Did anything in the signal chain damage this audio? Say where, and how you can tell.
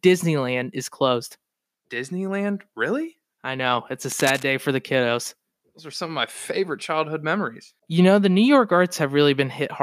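Yes. From 4.12 to 4.47 s a dense, uneven burst of scratchy rustle sits over the speech, roughly 10 dB under it. That's cable scratch noise from the analogue wiring stage, likely a worn lead or connector shifting, its contact resistance jumping around as it moves.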